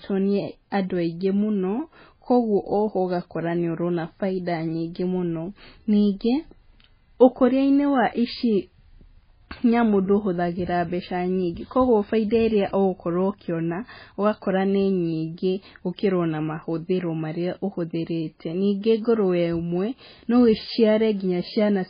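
Speech runs dull and watery from start to finish, with nothing above 5 kHz, swirling, smeared consonants and metallic chirps on s sounds. That heavy damage is likely MP3 compression at a very low bitrate, around 16 kbps, where weak frequency lines are dropped frame by frame.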